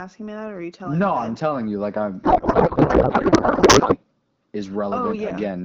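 Right after "telling you like I'm", from 2.23 to 3.98 s, there's a codec payload misread: the AMR-WB decoder is parsing frames with the bits shuffled, which fits octet-aligned packing read as bandwidth-efficient, so the speech turns into garbled, warbly noise that barely tracks it.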